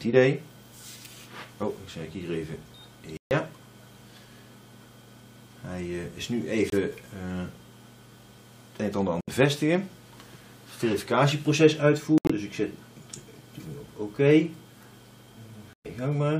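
Five dropouts from corrupt frames being muted occur at 3.17 to 3.32 s, 6.70 to 6.74 s, 9.21 to 9.29 s, 12.18 to 12.32 s and 15.73 to 15.86 s. Each is a corrupt frame muted by the player. Damaged compressed frames failed to decode, so silence replaced them. The gaps run from 0.04 s to 0.15 s, which fits a few consecutive frames lost each time. The sound cuts out abruptly, then resumes on time.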